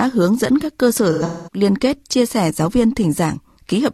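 Speech with AAC frame loss and concealment from 1.12 to 1.61 s, between "dẫn các cơ sở" and "kết chia sẻ giáo". About 300 ms of frames drop out, the longest run around a fifth of a second. The decoder repeats and fades the last spectrum, which sounds smeared and phasey and shows on a spectrogram as blurred, decaying bands.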